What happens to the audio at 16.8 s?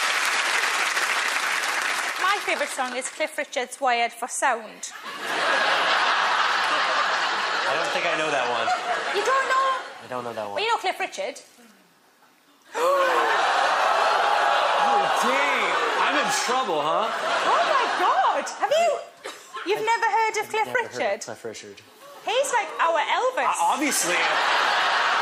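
Nothing goes wrong at 16.8 s; the audio plays through that moment intact, with no audible fault.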